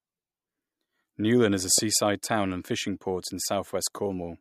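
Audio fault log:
1.78–1.80 s, loud pop: between "is a" and "town and fishing port", a single sharp pop about 10 dB above the speech lands on top of it while the speech carries on underneath, likely a brief voltage pulse from a plug, switch, static discharge or driver glitch.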